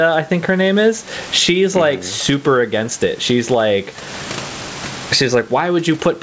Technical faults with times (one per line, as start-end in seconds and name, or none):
0.00-6.22 gain pumping